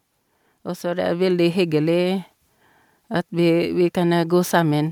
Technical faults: automatic gain rising

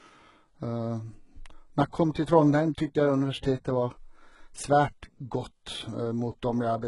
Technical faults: HE-AAC compression

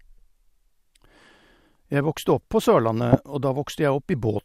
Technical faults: DAB burbling

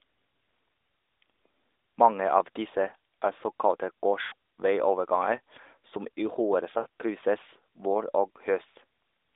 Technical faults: lost AMR speech frames

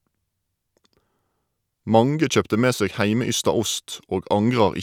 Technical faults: none

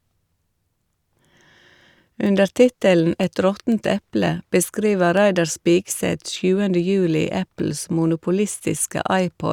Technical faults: word clock ticks

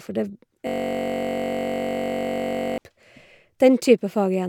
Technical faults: system hang loop

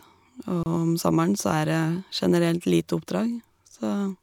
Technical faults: gap at a join of encoded pieces

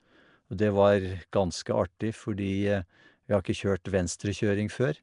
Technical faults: Nellymoser compression

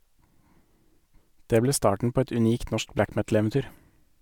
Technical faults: none

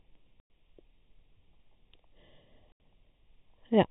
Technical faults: channel delay (comb filtering); packet loss filled with silence

